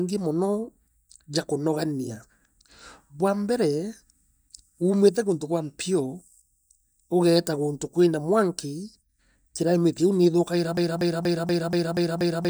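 At 10.77 s, after "climate liu niithukaira", a broken-record loop repeats one 0.24 s fragment seven times to the end, likely a stalled player resending its buffer.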